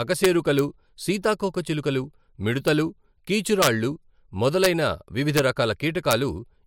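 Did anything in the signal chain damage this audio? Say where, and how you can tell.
Yes. Integer overflow during sample-format conversion: gain pushed peaks about 0 to 3 dB past full scale, wrapping them to the opposite sign and producing violent cracks at 0.24–0.59, 2.68, 3.62–3.67, 4.64–4.66, 5.37–5.39 and 6.11 s.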